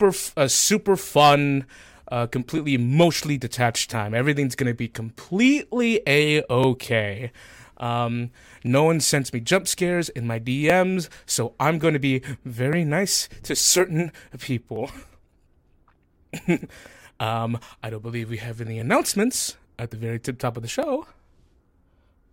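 From 0.55 s to 20.83 s, a regular click recurs every 2.03 s, about ten in all. These are clock drift buffer slips, likely from two devices whose clocks differ by roughly 500 ppm, each slip dropping or repeating a block of around 50 samples.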